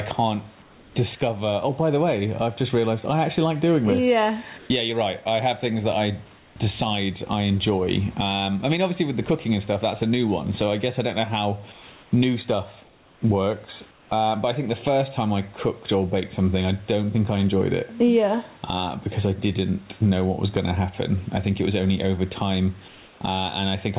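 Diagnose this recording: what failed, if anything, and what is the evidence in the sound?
Throughout the speech, the background swells in pauses and ducks by roughly 15 dB under loud syllables. At the call-processing stage, input gain set far too high likely drives a fast limiter.

In pauses at 0.62, 4.58, 6.38 (after "have things that I"), 11.72, 12.83, 13.91 and 22.88 s, the room tone turns flat, featureless and slightly altered in level. This is comfort noise in place of the background, likely from discontinuous transmission in the call path.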